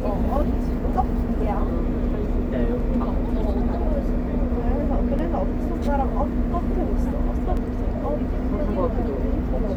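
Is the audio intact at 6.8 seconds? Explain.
No, 6.8 s falls inside a run of clock drift buffer slips from 0.42 to 7.57 s: a regular click roughly every 2.38 s, about four in all. It's likely two clocks about 150 ppm apart, dropping or repeating roughly 15 samples each slip.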